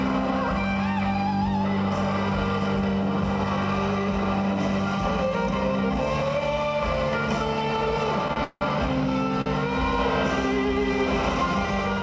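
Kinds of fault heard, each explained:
Short stall from a late packet: A packet arrived after its playout time, so the jitter buffer ran dry and the receiver held the last sound until the data turned up, then carried on from the same point. Nothing is lost, but the audio is stretched. At 8.33 s a sound is prolonged by 27 ms, and at 9.41 s by 45 ms. Each is heard as a brief hold with a faint buzzy dip.
Call audio freeze: Packets were likely delayed in transit long enough to empty the jitter buffer completely. From 8.44 s to 8.63 s the receiver fills 169 ms. It first continues the last sound as a fading buzz, then leaves about 40 ms of silence before the audio resumes where it stopped. The result is an inserted pause rather than missing material, sitting just after the first short stall.
Doubled audio track: The same audio is mixed in twice, likely from a second, slower capture path. From 9.77 s to the end, a full-band copy runs about a tenth of a second behind the original and roughly 5 dB quieter. 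It has no room decay or colour, and it starts abruptly, giving a hard, slapback-like doubling. Like the original, the copy has no content above 8 kHz.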